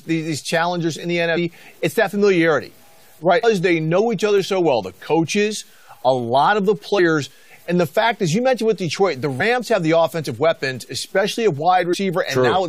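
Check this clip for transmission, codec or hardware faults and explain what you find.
Two faults are present in the speech: a gritty low-bit-depth texture throughout, and four short bursts of damaged data in a compressed stream.

Low bit depth without dither runs the full length of the clip. The grain follows the speech, roughening quiet syllables and making the softest tails sputter or drop out rather than fade smoothly. The likely cause is truncation to a coarse word length with no dither, which fits 8 bits. The error sits roughly 35 dB below the speech.

Damaged data in a compressed stream appears at 1.36, 3.43 and 9.39 s, and from 11.92 to 11.94 s. Each event is a brief chirp or blip lasting about 20 ms or less. Corrupted bytes make the decoder misread a frame, lose sync and hunt for the next valid header.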